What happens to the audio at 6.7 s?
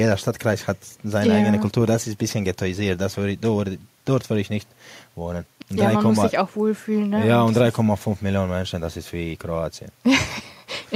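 Nothing goes wrong at 6.7 s; the speech carries on intact through that moment, with no dropout, click or distortion.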